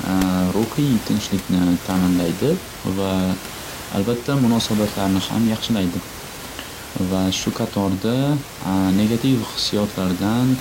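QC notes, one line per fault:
No faults detected.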